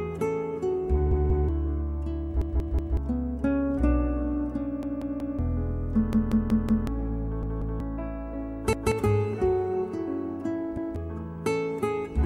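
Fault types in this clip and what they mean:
Repeated buffer: late audio forced replays of the last 186 ms slice, up to four extra times, a hard-edged stutter rather than a dropout's silence.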